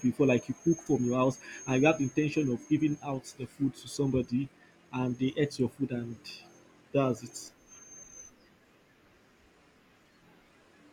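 No audible technical faults.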